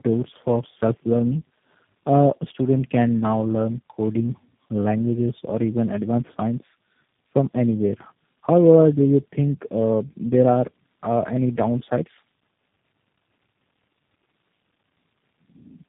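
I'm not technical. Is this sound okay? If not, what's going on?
No, not quite. It has tandem speech coding all the way through: the call passed through three different phone-style speech coders in a row, each squeezing an already squeezed copy. That stacks up as rough, muffled, warbly speech with nothing above about 3.8 kHz.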